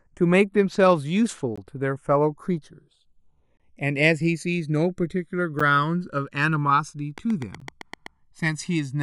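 Across the whole speech recording the two channels are drifting apart: their clocks disagree by something like 150 parts per million, so the inter-channel delay creeps up to around 1 ms by the end. Folded to mono, the resulting comb notches glide slowly downward through the spectrum, giving a continuous flanging sweep. Unlike a fixed phase offset, which colours the tone statically, the colouration here keeps moving.

A gap between stream segments opens at 1.56 s, lasting 17.6 ms, then again from 3.57 to 3.60 s (25.4 ms), at 5.59 s (10 ms) and at 7.60 s (14 ms). The two-second spacing reveals segment boundaries whose time stamps leave a hole the player pads with silence. Each is a hard-edged dropout with nothing missing from the speech, which distinguishes it from a true packet loss, where a slice of audio disappears.

From 7.18 to 8.07 s a train of clicks ticks over the speech, about seven near-identical pulses at a steady 8 per second, peaking roughly 10 dB above the signal. 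The regular, repeated shape likely comes from electrical interference or a faulty connection or power supply, not from isolated edit pops or dust-like crackle, which would vary in size and timing.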